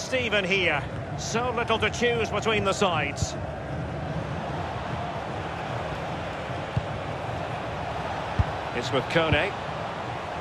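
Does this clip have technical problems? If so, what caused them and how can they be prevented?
No, the signal shows no technical faults anywhere in the clip, so there is nothing to trace back to a cause or to prevent.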